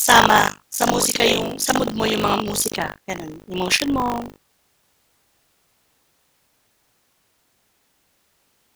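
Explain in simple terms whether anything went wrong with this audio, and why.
Buffer tearing runs through the whole recording. The speech carries a steady robotic rattle, 50 times a second, where roughly a fifth of each tiny chunk replays sound from about 70 ms earlier. Unlike mains hum, it vanishes whenever the speaker pauses.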